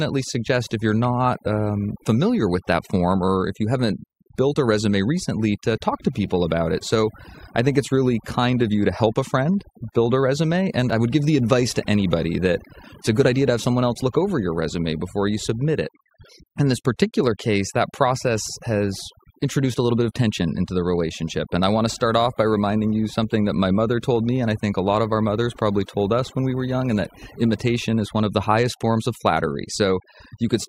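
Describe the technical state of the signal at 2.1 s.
At 2.1 s, as throughout the recording, overdone noise removal is at work: the noise reduction is set so hard that bands near its noise estimate get cut almost to nothing, taking quiet speech detail too, leaving a lowered, twinkling background.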